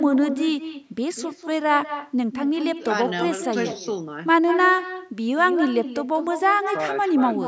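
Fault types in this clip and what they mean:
echo with no canceller: Every phrase of the speech is trailed, about a fifth of a second later, by a copy about 10 dB quieter that sounds thinner. The far end's loudspeaker feeds its microphone, and nothing removes that returning sound.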